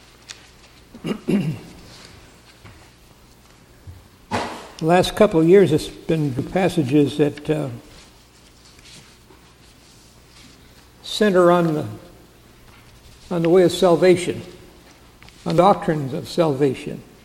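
At 6.39 s and again at 15.58 s, the compressed stream carries damaged data: bytes in those stretches have been lost or overwritten, so the decoder misreads the affected frames, loses sync and has to hunt for the next valid frame header before it can resume. Each incident comes through as a brief chirp or blip that cuts across the sound, with the audio picking up again once the decoder locks back on.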